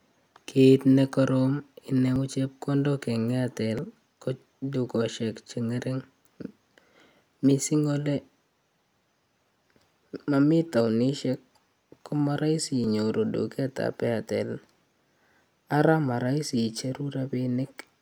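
Speech with three places where the sound jumps straight ahead: at 2.16 s, at 3.79 s just before "ko dukosiek", and at 12.84 s between "ko marahisi" and "inyoru duket ap". Each skip loses a few hundredths of a second at most, which points to a likely dropped buffer (overrun). Unlike an underrun, no silent gap is left.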